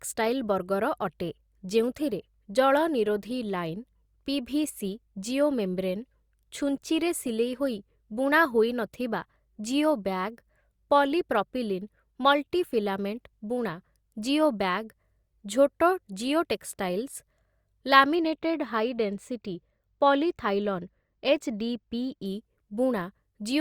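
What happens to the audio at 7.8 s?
Nothing goes wrong at 7.8 s: the speech there plays through intact, with no dropout, click, distortion or other fault.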